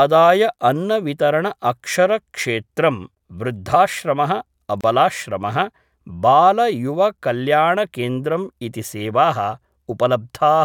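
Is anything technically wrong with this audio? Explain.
Yes. At 4.81 to 4.84 s the speech drops out for about 29 ms. This is a gap at a join of encoded pieces. Two separately encoded segments were butted together untrimmed, keeping encoder delay and end padding. The silence has smeared edges, then the speech resumes where it stopped.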